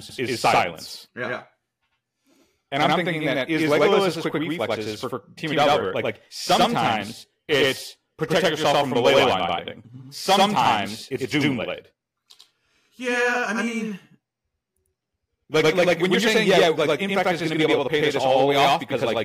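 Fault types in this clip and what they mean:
Channel delay (doubling): throughout the clip, every syllable of the speech is followed by a second copy at the same level about 93 ms later. One channel is running late by a long buffer, which fits a 4096-sample offset, and when the two channels are summed to mono the late copy doesn't blend in. It sits apart as a distinct slap echo, so each consonant onset sounds doubled.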